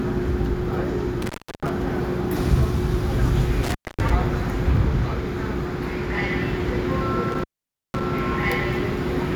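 A clip of everyday sounds that drops out three times, at 1.22–1.69 s, 3.63–4.10 s and 7.32–8.03 s, with crackle at each edge and faint hiss while the gaps of about 0.33 s, 0.24 s and 0.5 s last. This is intermittent contact, where a loose cable or plug briefly breaks the signal path.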